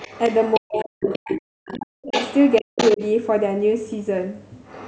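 Speech recorded through a call's microphone chain, band-limited with nothing above 8 kHz, carries a second, quieter voice in three stretches: 0.00 to 0.61 s at around 15 dB below the talker, 1.02 to 3.05 s at around 10 dB below, and 4.66 s to the end at around 25 dB below. This is the other side's voice leaking through, likely loudspeaker echo the canceller did not fully remove. It differs from ordinary crosstalk or room bleed because it appears only in bursts that follow the far end. Around those stretches the talker's own speech sinks sharply, by up to around 40 dB, from 0.58 to 2.15 s (about 1.5 s affected in total) and again from 2.61 to 3.01 s (about 0.2 s). That pattern points to speech suppressed in double talk, likely the echo canceller turning down both voices at once. Unlike network dropouts, these dips fall during or right beside the stretches where the other voice is present rather than landing at random.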